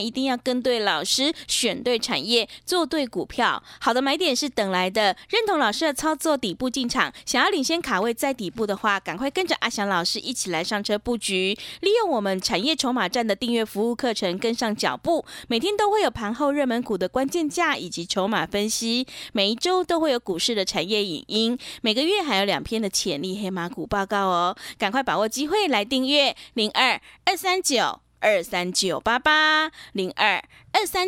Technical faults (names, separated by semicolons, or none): repeated buffer